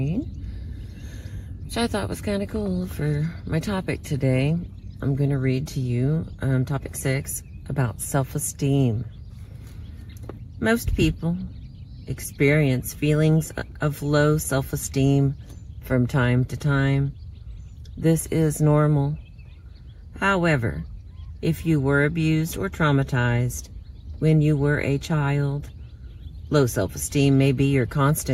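No faults turn up anywhere in the recording.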